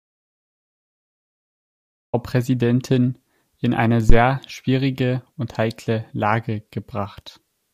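The clip opens in an audio dropout to silence that lasts until 2.14 s. There is no room tone at all, only silence. The speech then starts abruptly. The likely cause is a lost input or a stray mute while the recorder kept writing zeros.

At 4.10 s a phantom power thump arrives and is over by 4.19 s. It is a deep, dull knock with a quick decay of about 21 ms. A supply switched on a live input pushed a voltage step through the coupling capacitors.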